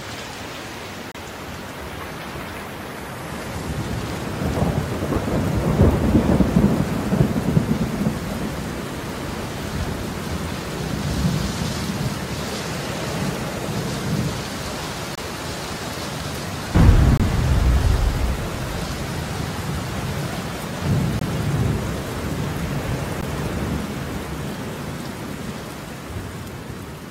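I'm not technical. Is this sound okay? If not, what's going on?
No. There are six brief, hard-edged dropouts to silence, called a gap between stream segments, at 1.12 to 1.15 s, 5.14 s, 15.15 to 15.18 s, 17.17 to 17.20 s, 21.19 to 21.22 s and 23.21 s. The audio arrives in 2-second pieces whose timing doesn't quite line up, so the player fills each gap with up to 30 ms of silence. No sound is missing.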